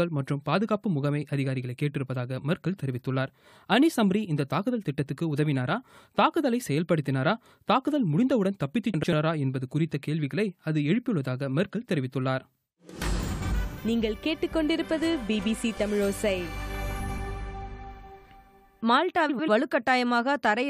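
Frames out of order at 8.94–9.13, 13.32–13.52, 16.99–17.19 and 19.29–19.49 s: two adjacent blocks of about 93 ms, consistent with runs of four frames, play swapped, giving a brief garbled flutter. Spectrograms show three vertical seams per event where the texture jumps.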